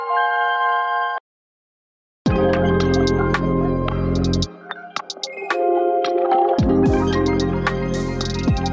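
Gain pumping runs through the whole clip: the level rises and falls in a breathing motion, a swing of roughly 10 dB. The likely cause is input gain set far too high, with a fast limiter or compressor clamping it down on every peak. Loud and quiet passages end up squeezed together, and the sound comes across flattened and crowded, within a call-style band that stops at 8 kHz.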